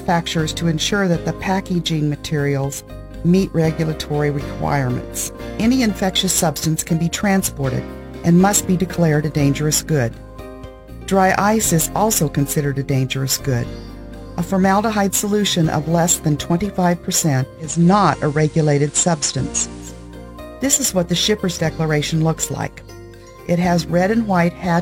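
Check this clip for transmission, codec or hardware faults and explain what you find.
There is one fault, a digital radio blending to analogue from 17.57 to 20.17 s. The receiver lost its digital stream and cross-faded over 357 ms to the FM broadcast of the same station, then back. During the FM stretch hiss rises to roughly 30 dB below the signal, and the level shifts by about 1 dB before the digital sound returns.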